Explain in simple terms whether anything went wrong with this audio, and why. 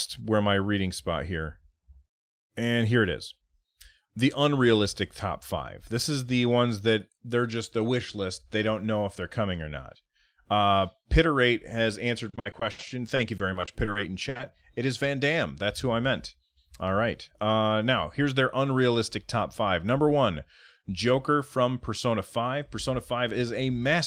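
Right after "has answered", from 12.29 to 14.41 s, there's repeated packet loss (robotic sound): a string of tiny dropouts, none longer than 70 ms, each patched by stretching the last bit of sound. About a quarter gets patched, so it sounds choppy and robotic.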